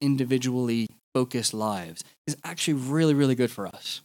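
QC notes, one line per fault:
0.87–0.90 s and 3.71–3.73 s, gap at a join of encoded pieces: the speech was encoded in separate pieces and joined without trimming, so each encoder's start-up delay and padded last frame stayed in. This opens gaps of about 28 ms and 22 ms in continuous speech, the first just before "focused lives is actually". The codec smears their edges into brief dropouts, and the speech resumes from where it stopped.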